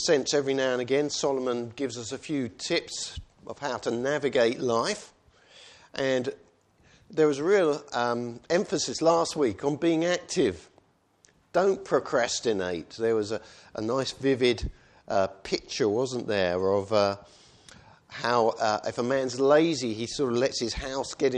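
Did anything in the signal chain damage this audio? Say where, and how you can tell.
No, no signal-chain damage audible.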